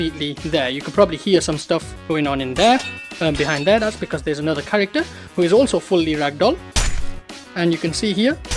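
No technical faults can be heard anywhere here.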